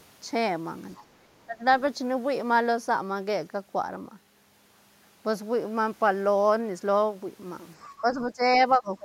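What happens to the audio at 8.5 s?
Just before that moment, from 7.86 to 8.41 s, the talker is pulled down by about 10 dB for roughly half a second. This is speech suppressed in double talk, likely caused by an echo canceller that could not tell the near talker from loudspeaker echo while both sides spoke, so it turned everything down. A dropout would silence the signal outright. Here the voice dips, and it recovers once the overlap ends.

Right after, from 8.53 to 8.6 s, a brief scrap of a second voice comes through at about 20 dB below the talker. This is the other side's voice leaking through, likely residual echo that the canceller failed to remove from the microphone after the far end played over the loudspeaker. Crosstalk or background chatter would sound like a natural, full-range voice. This fragment is short and quiet, and it sits right after the suppression.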